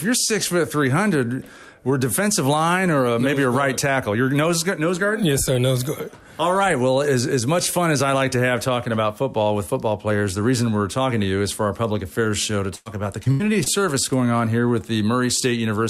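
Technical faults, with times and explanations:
12.75–12.88 s and 13.32–13.42 s, burst of packet loss: the sound stalls into a held, fading continuation, ending in a brief silence in the first, then jumps ahead. About 100 ms and 80 ms never arrived, so the receiver stretched the last sound and dropped that stretch.
13.24–13.27 s and 13.64–13.68 s, short concealed packet loss: each is a quick smear or wobble. Roughly 20 ms of audio missed the decoder, so it extrapolated the preceding sound and blended back into the real signal.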